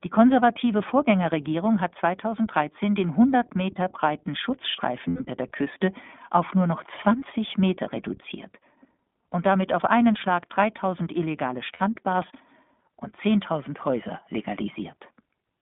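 Throughout, the iLBC codec at a rate that fits 15.2 kbps narrows the line to 200 Hz to 3.6 kHz, leaving the speech plainly rough, slightly synthetic and muffled. Lost iLBC frames at 5.08 to 5.22 s (120 ms, consistent with six 20 ms frames) and 11.74 to 11.82 s (60 ms) force the decoder to repeat the last pitch cycle with added noise, heard as a brief held, buzzy vowel before the speech recovers almost immediately.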